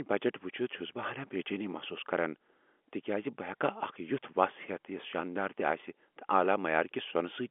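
Speech over a G.711 telephone line with its usual band of 250 Hz to 3.4 kHz and nothing above 3.7 kHz, and no technical faults to report.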